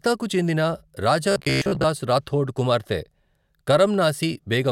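From 1.32 to 1.86 s the speech turns into robotic sound from repeated short buffers. The voice becomes a rigid, metallic buzz near 66.7 Hz. It still tracks the speech loosely. The likely cause is audio arriving too slowly. To fill the gaps, a 15 ms slice seems to have been looped over and over. Most of the real audio in that stretch is skipped.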